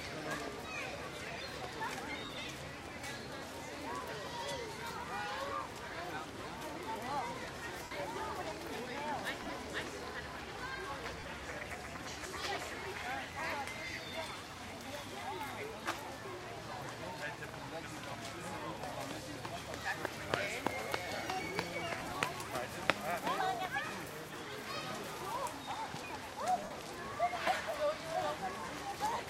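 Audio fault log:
2.25–2.30, 7.83–7.91, 9.42–9.56, 11.19–11.24, 21.99–22.16 and 26.64–26.71 s: lost LE Audio frames. Gaps of 37.5 to 75 ms, which fit 7.5 ms frames, are scattered within the 9.42 and 21.99 s events. The LC3 decoder fills each gap by reusing the last spectrum with random signs, smearing the sound into noise that fades.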